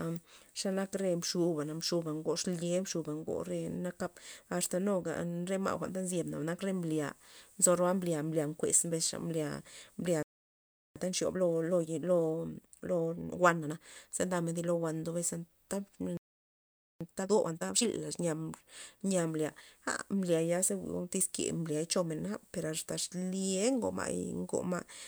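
A playback stall at 10.23 s drops the speech into silence for 0.73 s, likely because the player ran out of buffered data or its thread was blocked. Time-compressed catch-up follows from 10.96 to 13.86 s: the player trims its backlog by cutting out and cross-fading small slices, so speech runs 1.25 times fast at normal pitch. A second playback stall silences the speech from 16.17 to 17.01 s, lasting 0.83 s. A sharper catch-up from 17.01 to 17.83 s then doubles the pace, sounding hurried.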